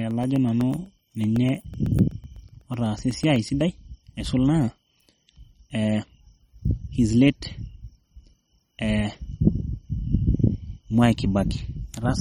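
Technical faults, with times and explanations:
Throughout, MP3 compression: the sound has a plainly audible watery, swirling quality, with a metallic edge on sibilants and softened attacks, and nothing is present above about 18.6 kHz. This is likely an MP3 encoding at a very low bitrate, around 33 kbps. Starved of bits, the encoder cuts off the top band and drops weak frequency components that flicker in and out from frame to frame, producing the swirl.
0.11 to 3.61 s, periodic USB or driver dropouts: a steady train of small ticks runs through the opening stretch, ending just before "aisul naa". They repeat every 0.125 s, eight per second, roughly thirty in all. Each is a gap of about a millisecond where the audio is replaced by silence, as a recurring background task stalls the USB transfer or audio driver. The abrupt break in the waveform is heard as a click.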